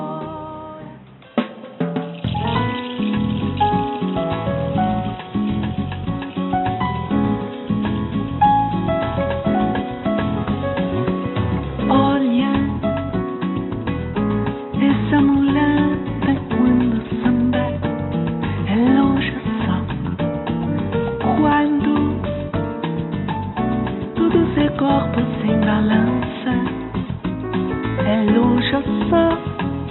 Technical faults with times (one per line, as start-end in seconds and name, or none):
none